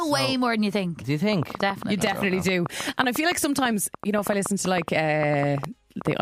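From 1.33 s to 6.12 s a train of clicks runs over the sound: around forty similar pulses at an uneven pace averaging 7.5 per second, peaking about 10 dB above the signal and ticking through pauses too, likely interference from nearby equipment or a faulty connection or power supply.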